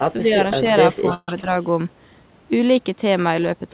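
At the very start, 0.0 to 0.05 s, the speech dips by roughly 5 dB, and again from 1.41 to 1.50 s. This is speech suppressed in double talk, likely an echo canceller turning down the near talker while the far side spoke. The sound dips.

From 1.14 to 1.29 s comes a call audio freeze, likely a jitter buffer running dry. About 136 ms is filled in, a filler sound that decays and ends in roughly 30 ms of silence. The speech then resumes where it paused, with nothing lost, which sets it apart from packet loss.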